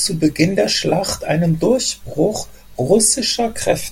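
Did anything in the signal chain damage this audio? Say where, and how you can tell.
No, nothing in the signal chain damaged this audio.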